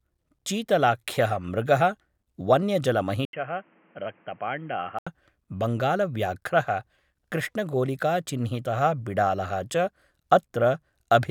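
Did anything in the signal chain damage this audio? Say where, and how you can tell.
Yes. From 3.25 s to 5.07 s the sound turns dull and boxy, with nothing above 3.2 kHz, a level drop of roughly 10 dB and a new noise floor sitting around 30 dB below the signal. An 80 ms gap of silence marks the switch. This points to the capture stage: the input likely switched to a poorer device, with its own narrow bandwidth, gain and noise floor, before switching back to full-band capture at 5.07 s.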